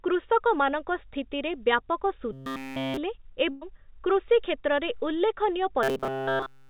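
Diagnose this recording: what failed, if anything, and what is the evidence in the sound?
Robotic sound from repeated short buffers: the buffer stage, likely starved of data, looped a 7.5 ms block, forcing a 133 Hz buzz at 2.33–2.97 s and from 5.83 s to the end.

A burst of packet loss on the network at 3.50–3.63 s: the receiver stretched the last sound over 113 ms as it faded, then resumed with 120 ms skipped.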